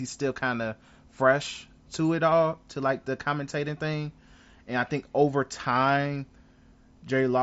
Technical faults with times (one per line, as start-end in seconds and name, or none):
none